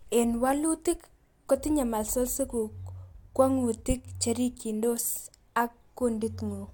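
No faults audible in this speech recording.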